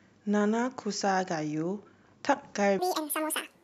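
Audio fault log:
2.79–3.63 s, section at the wrong speed: speech abruptly turns high and hurried, about ten semitones up at 1.83 times speed, likely from playback against the wrong clock.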